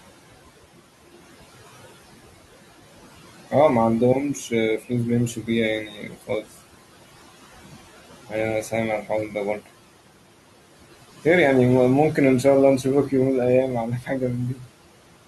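Noise suppressor artifacts run throughout: the room noise is pulled down by about 16 dB between phrases, so the background pumps instead of staying steady.

Speech cut by the noise suppressor occurs at 5.85 to 6.47 s, 14.01 to 14.22 s and 14.54 to 14.70 s. Quiet speech, mistaken for noise, drops by about 13 to 18 dB and sounds swallowed but not silent as in a dropout.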